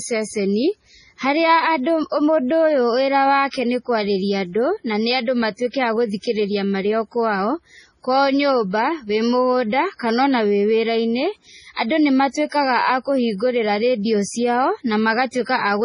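Throughout the speech, the treble stops dead at 10.6 kHz, leaving a flat empty band across the top of a spectrogram. Watery, swirling texture and blurred consonants suggest heavy damage, likely MP3 compression at a bitrate around 24 kbps, zeroing weak frequency lines frame by frame.

Pre-echo appears from 11.73 to 11.77 s, 12.49 to 12.52 s and 15.31 to 15.33 s, spreading 40, 28 and 28 ms. Codec noise smeared across each block precedes sharp onsets as brief hiss, visible as haze before the waveform's attack.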